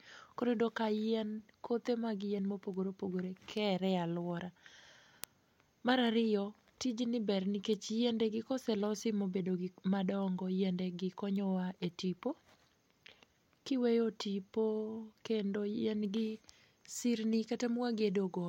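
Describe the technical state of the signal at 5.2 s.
Word clock ticks run through 5.2 s, part of a series from 0.24 to 17.72 s. An unlocked receiver clock drifts roughly 30 ppm from the sender, slipping one sample about every 0.7 s. Each slip is a sharp tick of uneven strength over the speech.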